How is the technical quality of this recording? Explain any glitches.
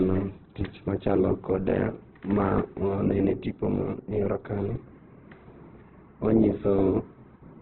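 The technical quality is poor, with heavy codec damage across the whole recording. Opus compression is the likely cause. For the entire clip the speech is narrowband, with nothing above 4.3 kHz, and sounds muffled, rough and grainy. The encoder has too few bits to describe each band in detail, so it preserves band energy but fills the gaps with folded or noise-like content. That points to a very low rate of around 8 kbps in its music mode. A spectrogram would show a hard ceiling at 4.3 kHz and speckled, smeared texture below it where harmonics should be. A waveform would look normal in level.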